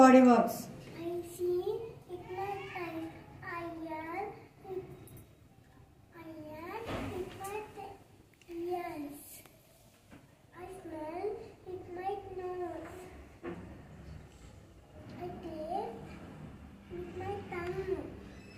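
Nothing stood out on listening; no audible problem turned up anywhere in the recording.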